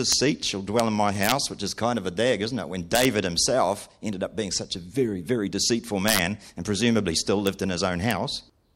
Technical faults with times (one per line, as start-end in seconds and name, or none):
0.12 integer overflow
0.80 integer overflow
1.23-1.32 integer overflow
2.95-3.05 integer overflow
6.08-6.19 integer overflow
7.47 integer overflow
8.11 integer overflow